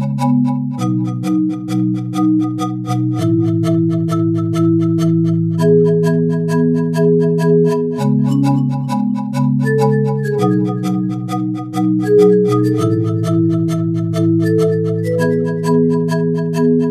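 No technical faults can be heard anywhere in this audio. There is nothing to point to in time and no cause to explain.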